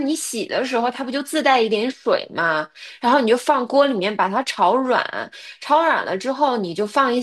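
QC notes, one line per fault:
No faults heard in this speech recording.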